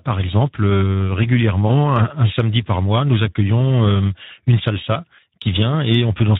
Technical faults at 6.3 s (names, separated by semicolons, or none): Speex codec